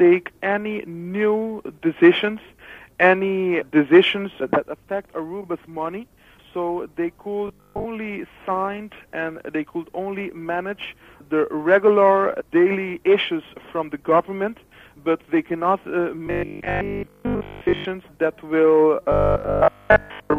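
From 7.48 to 7.86 s, 16.27 to 17.85 s and 19.12 to 20.38 s, the sound turns into a rigid metallic buzz at 50 Hz. This is robotic sound from repeated short buffers, likely caused by a 20 ms slice being replayed in place of most of the missing audio. The fixed pitch that overrides the material distinguishes it from plain dropouts or stutter.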